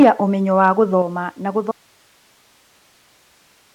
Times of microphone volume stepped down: 0.03, 1.02

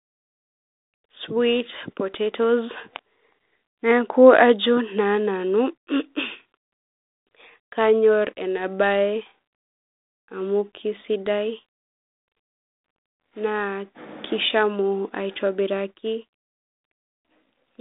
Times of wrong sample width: none

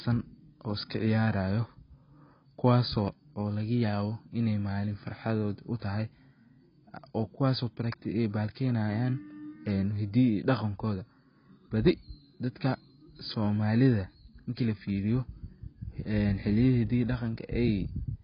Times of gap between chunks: none

